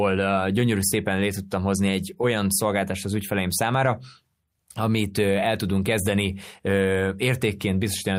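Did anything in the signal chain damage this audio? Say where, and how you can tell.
No, none of the stages in the chain have left an audible fault on this speech recording, from the wiring and converter through to storage and playback.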